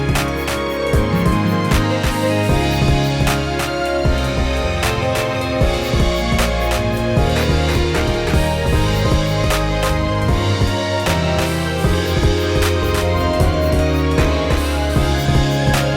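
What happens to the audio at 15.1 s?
A doubled audio track is present at 15.1 s and throughout, likely from a second capture path or an edit holding two copies out of step. A full-band copy trails about a third of a second behind, roughly 5 dB quieter, as a dry, distinct repeat.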